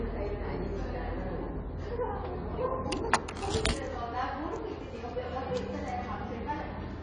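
Everyday sound, dull and smeared throughout, with plainly audible AAC compression damage likely the cause, fitting roughly 24 kbps; a spectrogram shows a hard ceiling at 10.1 kHz.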